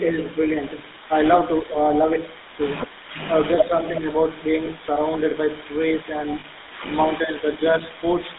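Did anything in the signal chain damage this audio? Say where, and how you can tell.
Yes. The codec stage is the first culprit. GSM full-rate coding runs through the whole clip: the speech is squeezed into roughly 200 Hz to 3.7 kHz and carries that buzzy, gravelly texture you get when the excitation is coarse regular pulses. That fits a 13 kbps full-rate coder.

Call processing adds an echo leak from 0.66 to 3.14 s and again from 4.23 to 4.82 s. A faint delayed copy trails the talker by 371 ms. It sits around 25 dB down in the first stretch and about 30 dB down in the second. Most likely a speakerphone's echo canceller let some of its loudspeaker pickup through.

Speech suppressed in double talk appears in the same call-processing stage, at 1.61–1.78 s, 3.62–4.06 s and 7.07–7.45 s. The talker briefly ducks, by up to around 10 dB at the first spot and less at the others. It sounds like the canceller couldn't tell voice from echo and turned both down.

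The network leg shows lost GSM frames at 4.66 s, lasting 20 ms, which fits one frame, and at 6.40–6.45 s, lasting 40 ms. Each gap turns into a short, rough metallic ring, because the decoder keeps repeating the last good frame's settings.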